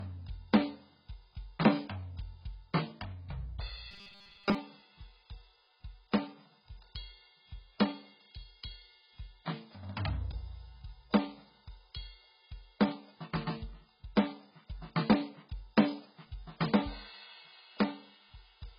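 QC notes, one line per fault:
Throughout, AAC compression: the music is dull and smeared, with a warbly, fizzy texture on sustained sounds. This is likely heavy AAC-LC coding at a very low bitrate, around 12 kbps. At that rate the encoder has too few bits for the upper spectrum, so it pulls the cut-off right down and leaves gaps or noise-filled bands in what remains. That produces the blur and swirl you hear across the whole clip.
3.91–4.55 s, robotic sound from repeated short buffers: for about two-thirds of a second the music turns into a rigid metallic buzz pitched at 200 Hz. It still tracks the music's movement loosely. The likely cause is new audio arriving too late, with playback looping the last small chunk to fill the gap. Most of that stretch is made of repeats, and the repeat period sets the buzz pitch. A 200 Hz buzz fits a loop of about 5 ms, while the real audio underneath is skipped.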